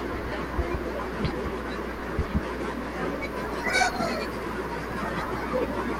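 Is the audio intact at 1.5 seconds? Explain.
No. At 1.50 s there is mains hum, which runs through the whole clip rather than starting or stopping there. Power-line current has leaked into the signal path, probably through a ground loop or a nearby transformer, so a steady 60 Hz tone with a few low harmonics sits under the speech. It is strong, roughly 10 dB below the speech, and is heard as a constant low buzz that never lets up.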